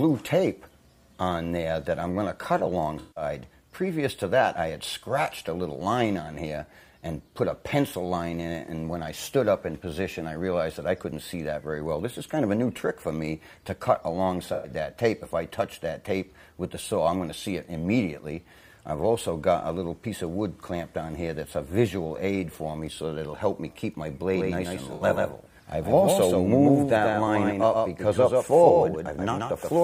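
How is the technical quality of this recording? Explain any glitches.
The recording has two kinds of fault: three short dropouts patched over by the decoder, and a second copy of the audio that runs through the final stretch.

AAC frame loss with concealment occurs three times. The first is from 2.99 to 3.23 s, the second from 14.53 to 14.70 s, and the third from 24.94 to 25.02 s. Blocks of the compressed stream went missing, and the decoder filled each gap by reusing the last good spectrum with altered phase. The losses last about 0.17 s, 0.11 s and 0.06 s. Those lengths fit about eight, five and three AAC frames. Each gap sounds like a brief smeared, hissy or phasey patch.

A doubled audio track starts abruptly at 24.32 s and runs to the end. A second, full-band copy of the sound trails the original by about 150 ms. It sits about 5 dB lower and carries no reverberant tail. The likely cause is the same signal arriving again through a slower capture path. 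The result is a hard, slapback-like repeat with no room sound.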